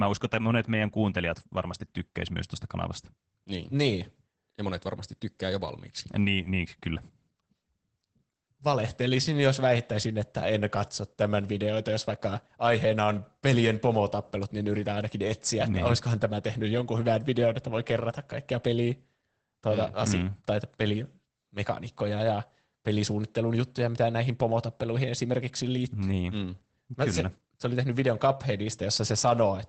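The speech throughout shows Opus voice compression, plainly audible as muffled, hoarse, slightly robotic sound, consistent with the SILK coder at a rate near 12 kbps coding the excitation coarsely. A spectrogram shows smeared harmonics, frame-regular texture fitting 20 ms frames, and nothing above 16.5 kHz.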